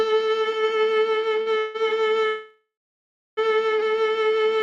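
At 1.41 to 1.48 s the music shows a short stall from a late packet. The jitter buffer ran dry, so the receiver held the last sound for about 45 ms until the packet arrived, giving a brief smeared sustain with nothing lost.

Two call audio freezes follow, each likely caused by packets held up in transit, emptying the jitter buffer. From 1.58 to 1.76 s, 166 ms of held, buzzy continuation is inserted without silence. From 2.26 to 3.39 s, a 1.1 s gap fades to 720 ms of silence, then the music resumes where it stopped.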